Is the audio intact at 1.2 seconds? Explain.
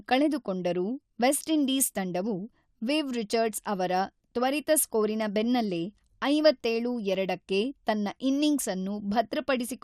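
No. At 1.2 seconds the speech carries MP2 compression damage, as it does for the whole clip. The sound is dull and gurgling, with a granular roughness on the speech. It is likely caused by MPEG Layer II coding. That codec divides the signal into 32 equal sub-bands and shares out a limited bit budget among them. Here the budget is too small, which fits a low rate of about 80 kbps. Upper bands switch off and flicker, and the bands that remain are coarsely quantised.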